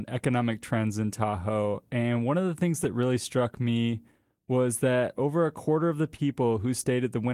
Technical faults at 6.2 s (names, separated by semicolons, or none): clock drift between sender and receiver; short stall from a late packet